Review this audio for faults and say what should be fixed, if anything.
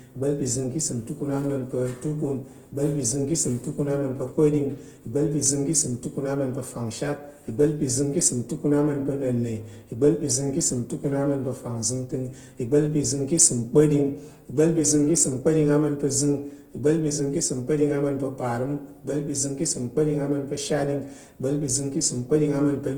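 Opus compression, throughout: speech sounds rough, grainy and noisy because the encoder is filling starved bands, likely from CELT music mode at a rate around 16 kbps.

Clock slip clicks, 0.11 s to the end (about 23 s): a soft rattle roughly every 0.03 s, likely from unsynchronised clocks drifting about 700 ppm apart and dropping or repeating single samples.

To prevent these, encode speech with Opus in voice mode at a higher bitrate, and lock both devices to one shared clock or resample between them.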